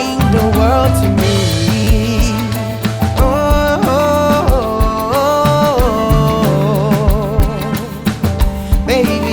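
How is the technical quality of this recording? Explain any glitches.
Two brief repeated-buffer glitches occur. At 1.84 to 1.87 s, a 10 ms slice of audio plays three extra times, and at 7.40 s another slice plays once more. New audio arrived late, so the device replayed its last buffer, which fits a 10 ms buffer size. Each is heard as a short buzzy click rather than a stutter, with nothing skipped. On a waveform, identical 10 ms segments sit side by side with hard joins. A spectrogram shows thin vertical lines at each join.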